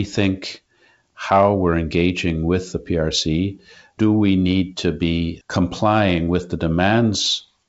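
No technical faults are audible.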